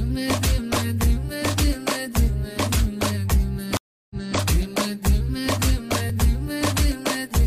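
At 0.77 s there is a repeated buffer: the next block of audio did not arrive in time, so the same 5.8 ms piece, which fits a 256-sample buffer, played once more. Because the repeated block is so short, it comes across as a small click with a hard join.

Between 3.77 and 4.39 s, a stream reconnect breaks the audio. The connection dropped and playback went silent for 314 ms. A fresh decoder then picked up mid-stream, and the sound resumes 279 ms earlier than where it stopped, so a short stretch is heard twice. At 3.94 s, inside this span, a second repeated buffer plays the same 5.8 ms block three extra times, giving a brief buzzy stutter.

At 6.10 s a third repeated buffer plays a 5.8 ms block once more, again heard as a short click.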